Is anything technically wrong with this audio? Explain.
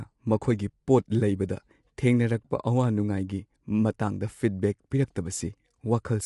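Yes. Low-delay AAC compression runs throughout the speech. The likely cause is an AAC-ELD encoder of the kind used for video calls. It codes about 500 frequency lines a frame with a low-delay window, and at a low bitrate the bits are spread thin. The damage is plainly audible: the speech sounds grainy and rough, with noise filling the gaps between harmonics. Nothing is present above 11.6 kHz. This fits a bitrate around 32 kbps.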